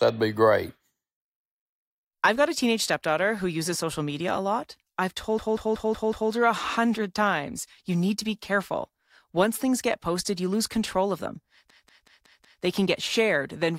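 A system hang loop strikes twice, at 5.39 to 6.32 s after "media a lot I've" and at 11.70 to 12.63 s after "lose control of them". The system froze while the hardware kept replaying its ring buffer, so one 186 ms slice, which fits an 8192-sample buffer, repeats five times at 5.38 Hz, a machine-gun stutter.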